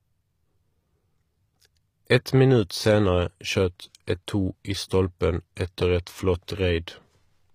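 From the start, the speech carries the sound of HE-AAC compression, likely at a low bitrate around 24 kbps. The lower spectrum is coded directly. The treble above it is rebuilt by copying lower bands upward and shaping them with a coarse envelope. So the top end sounds metallic and synthetic. Its harmonics do not line up with those below. The damage is plainly audible throughout, and nothing is present above 15.5 kHz.

At 2.05 s, a pre-echo smears an attack. The onset falls late within a transform block. The codec spreads its quantisation noise across the whole block, sized for the loud part. That noise leaks into the quiet moment just before the attack. It is heard as a short hiss of about 13 ms ahead of the onset. The attack itself loses its crispness and sounds softened.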